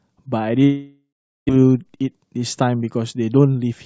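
From 0.64 s to 1.51 s the speech cuts out, most likely from a long network dropout. The receiver stretches the last sound into a fading buzz, followed by about 400 ms of silence. The speech resumes with roughly 600 ms missing. On a waveform this shows as a decaying envelope, then a flat line. A spectrogram shows smeared, fading bands ending in a blank gap below the 8 kHz ceiling of the G.722 call path.

From 3.32 s to 3.73 s a jitter buffer speed-up makes the speech rush at 119% speed with its pitch unchanged. To cut the excess delay, the receiver removes about a tenth of a second in many tiny pitch-period slices. On a spectrogram, syllables look compressed in time while harmonic spacing stays the same.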